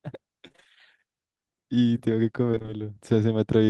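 It's a speech clip with two bursts of repeated packet loss (robotic sound): one from 0.47 to 0.67 s, another from 2.51 to 2.82 s. In each, a rapid run of short holes, the longest around 28 ms and 19 ms respectively, gets patched by stretching the previous bit of sound, so roughly half of each stretch is filler. Those recycled snippets back to back are what give it that choppy, robot-ish texture.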